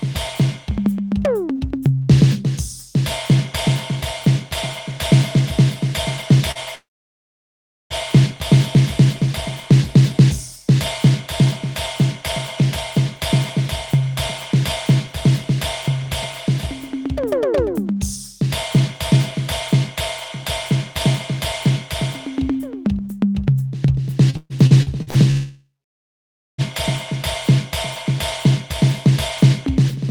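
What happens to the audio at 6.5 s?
At 6.51 to 6.58 s there is short concealed packet loss. About 40 ms of the music arrived too late for the decoder. The receiver filled the gap by extending the preceding sound, then blended back. It is heard as a brief smear.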